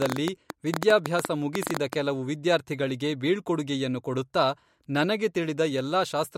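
From 0.02 to 1.94 s, a train of clicks ticks unevenly, about 10.5 per second, around 15 dB above the speech. Likely interference or a faulty connection. It stops before "ಕೆಲವು ವಿದ್ಯಾರ್ಥಿಗಳಿಗೆ ಬೀಳ್ಕೊಡುಗೆಯನ್ನು ಕೊಡುತ್ತಾ".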